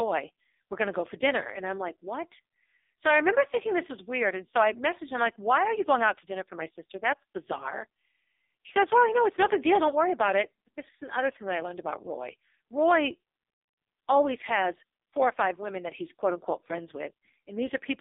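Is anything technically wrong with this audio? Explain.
Yes. Throughout, the speech carries AMR narrowband mobile codec damage. Nothing passes above 3.7 kHz. Heavy buzzy, synthetic coding fits a very low bitrate near 5 kbps.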